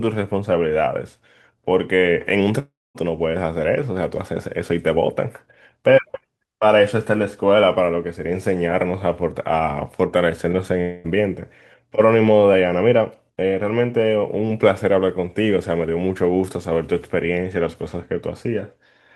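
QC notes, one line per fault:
2.59–2.98 s, long network dropout: about 360 ms of sound is missing, likely from lost packets. The receiver stretches the last sound into a fading buzz, leaving roughly 230 ms of silence before the audio resumes.
10.81–11.07 s, long network dropout: about 240 ms is lost, likely from a network gap. It is bridged entirely by a decaying buzz with no silent stretch, and the audio resumes past the missing part.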